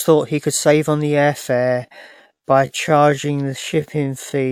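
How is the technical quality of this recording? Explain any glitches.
The recording has one clear glitch: a time-stretched section. From 1.52 s, right after "save on the air", to the end, the speech plays at about 0.64 times its original pace. It drags while the pitch holds steady, which sets it apart from a tape or clock slowdown. The likely cause is software lengthening the audio by repeating short pieces.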